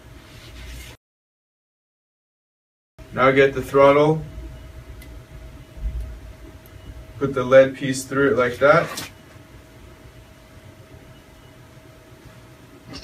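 No technical faults can be heard anywhere in the audio, which stays continuous and stable from its opening to its close.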